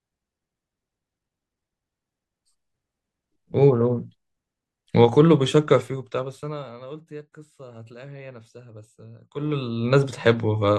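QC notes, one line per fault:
5.78–6.78 s, zipper noise: a gain drop of about 20 dB is applied in unsmoothed steps, around 50 per second, so each jump leaves a small click and a fast ticking zips along the sound as it fades down.
9.2–9.92 s, zipper noise: the reverse move, a rise of about 20 dB in steps of about 1 dB at the same rough rate, again unsmoothed, so the same zipping rides on the sound as it comes back up.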